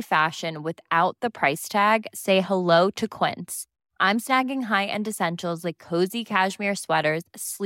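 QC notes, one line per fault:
6.84 s, corrupt FLAC frame: a brief error in the speech, peaking at about -27 dBFS, lasting roughly 4 ms. Damaged bits inside one compressed block were decoded without the checksum catching them, so the predictor rebuilt samples from wrong values, giving a short spurious transient. The disturbance stops abruptly where the next intact block resumes clean decoding, which points to a single frame being hit.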